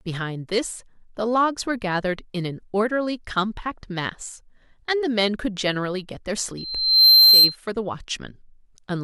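Speech, marred by loudspeaker feedback squeal from 6.57 to 7.56 s. A single 4.1 kHz tone swells over about half a second to roughly 15 dB above the speech as the microphone-speaker loop runs away. That gradual swell, unlike a steady interfering whistle, marks feedback.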